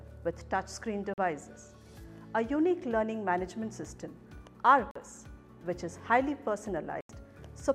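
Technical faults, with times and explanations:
1.14–1.18 s, 4.91–4.96 s and 7.01–7.10 s: Bluetooth dropouts. The sound cuts to silence for 43, 43 and 85 ms, then resumes further on, as if it had kept playing. The cause is likely late wireless packets being discarded, fitting two, two and four lost packets.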